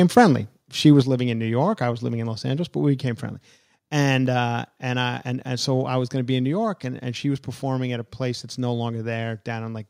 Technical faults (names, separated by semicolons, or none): microphone overload; microphone volume stepped down